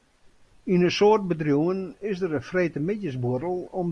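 Nothing stood out as a technical fault on listening to this speech recording.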